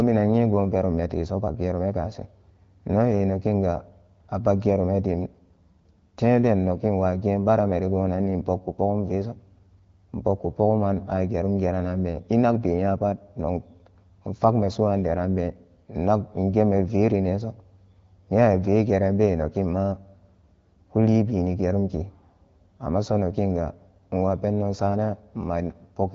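Nothing stood out on listening to this speech, which comes through the AMR wideband (HD Voice) codec at 12.65 kbit/s.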